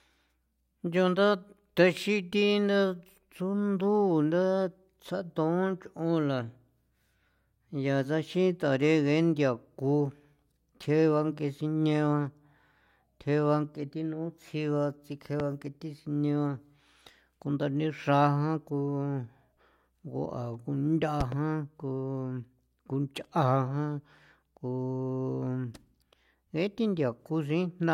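A loud pop strikes at 15.40 s. A double pop follows from 21.21 to 21.35 s. Both peak roughly 10 dB above the speech. The likely cause is a brief voltage spike.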